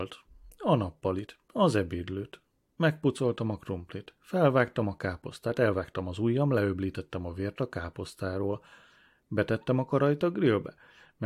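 At 9.23 s, just after "a vért a káposztáról" and before "betettem a karajt", a tiny skip interrupts the speech. This is an overlap between stream segments: two segments, apparently about 4 s long, claimed the same moment, and trimming that overlap discarded real speech, so the waveform jumps.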